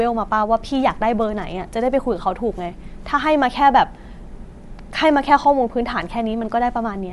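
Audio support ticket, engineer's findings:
Bluetooth LC3 compression, throughout the speech, whole clip. Plainly audible codec damage: breathy, grainy edge on the voice, nothing above 11.5 kHz. Likely cause is the LE Audio transform codec zeroing upper bands and noise-filling them, consistent with roughly 48 kbps and 10 ms frames. Differs from a plain low-pass or SBC: the top is hissy noise rather than dull or swirly.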